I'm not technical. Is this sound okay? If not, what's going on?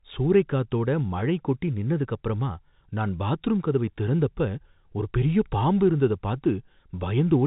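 Yes, this speech has no technical faults; it simply has the narrower, slightly boxed-in sound of an ordinary landline call, because G.711 telephone coding keeps nothing above about 4 kHz.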